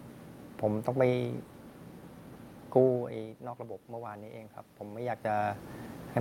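From 3.56 s to the end, there's automatic gain rising: the input got about 14 dB quieter, so the gain control slowly cranked itself up. You hear the voice and the room noise swell together over a couple of seconds, not just the talker moving.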